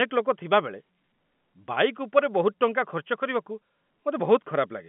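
Nothing here counts as a fault: the speech arrives over ordinary G.711 telephone coding, with the usual narrow phone band of about 150 Hz to 3.4 kHz, which is just how a regular landline call sounds.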